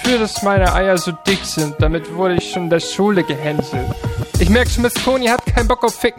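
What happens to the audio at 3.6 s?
A single sharp loud pop, from 3.59 to 3.62 s, jumps well above the surrounding level; it's likely a voltage spike from a switch, plug or static.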